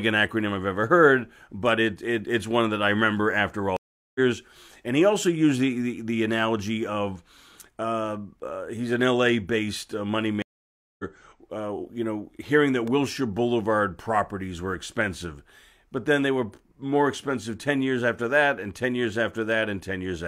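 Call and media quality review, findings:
Stream reconnect, 3.77–4.19 s and 10.42–11.04 s: speech drops out for 0.39 s, then 0.57 s, and resumes roughly 0.4 s, then 0.3 s further on. Connection dropped; player reconnected with a fresh decoder mid-stream, skipping content.

Loud pop, 12.88–12.90 s: single sharp pop about 5 dB above the speech, which continues underneath. Likely a voltage step or pulse from a plug, switch, static or driver glitch.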